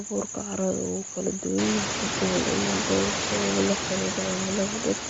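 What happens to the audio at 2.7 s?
At 2.7 s the speech carries audible codec damage, a grainy, breathy edge across the whole clip, likely from Bluetooth LC3 compression (consistent with about 32 kbps in 10 ms frames). A spectrogram shows nothing above 7.7 kHz. The room noise, which rose around 1.5 s, sits about 6 dB below the speech there.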